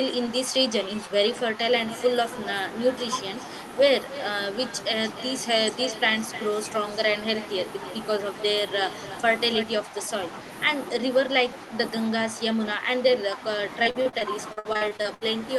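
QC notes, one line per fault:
0.47–1.6 s, 9.85–10.09 s and 11.0 s to the end: speech suppressed in double talk. With both sides talking at once, the echo canceller likely could not tell the near talker from the loudspeaker echo and pulled its gain down on everything. The voice dips by about 5 dB, over roughly 300 ms in the first stretch and 100 ms in the second, then keeps sagging through the final section.
1.88–2.02 s, 3.19–7.93 s and 8.87–9.64 s: echo leak. The far end's canceller likely left part of its loudspeaker pickup in the signal and sent it back, so a delayed copy of the voice trails the original by 269 ms in the first scrap and 295 ms after that. It sits about 15 dB below the speech, rising to about 10 dB below in the last stretch.
13.83–15.23 s: repeated packet loss (robotic sound). Over this span, packets kept arriving late or not at all, and each hole was patched by stretching the last bit of sound before the next hole arrived. 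Thirteen short gaps, the longest 63 ms, add up to about 420 ms missing, with roughly 30% of the span concealed. The voice turns choppy, with pieces dropped out.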